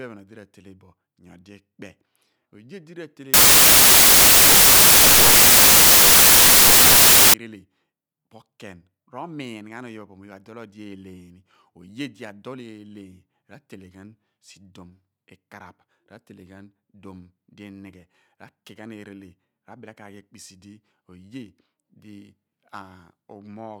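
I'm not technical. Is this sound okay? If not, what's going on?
No. From 3.34 to 7.34 seconds, the player makes a mistake called samples built from the wrong bytes. Each tiny piece of the recording is stored as several bytes, and here they are put back together wrongly, so the smallest, fastest-changing detail swamps everything else. For those four seconds the speech turns into loud hiss like static.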